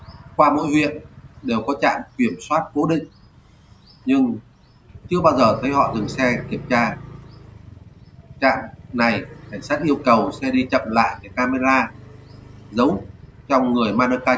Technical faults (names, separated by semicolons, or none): noise suppressor applied to music or sounds; sound cut by the noise suppressor